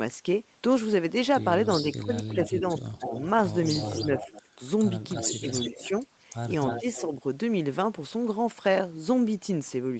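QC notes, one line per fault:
1.97–3.13 s, 4.02–4.6 s, 5.4–5.91 s and 6.81–6.86 s, speech suppressed in double talk: the speech dips in short bites. The dips are deepest in the first two spans, about 15 dB, then shallower, about 10 dB and about 5 dB, with the last only a brief flicker. The likely cause is the echo canceller turning down the near talker along with the returning echo, because it could not tell the two apart while both were active.
2.33–3.2 s, 3.75–4.42 s, 5.09–6.0 s and 6.67–7.02 s, echo leak: a delayed copy of the voice trails the original by roughly 0.3 s (298 ms in the first three spans, 324 ms in the last). It sits about 15 dB below the speech at first and about 10 dB below in the later spans. This is likely loudspeaker sound at the far end reaching its microphone and not being fully cancelled, so part of the voice is sent back down the line.
8.67–8.78 s, hard clipping: a brief harsh crackle lands on a loud peak. 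The waveform went about 2 dB past what the signal path could carry, so the tops were sliced flat. Those squared-off peaks add high harmonics that were not in the voice, which is why even this mild overload comes through as a short crackle.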